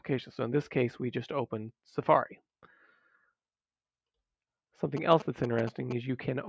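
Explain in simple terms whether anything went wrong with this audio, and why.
A galloping ticking buzz cuts in from 4.97 to 5.93 s. These are GSM signalling bursts: a nearby 2G phone's radio pulses, repeating 217 times a second, get picked up by the audio circuit.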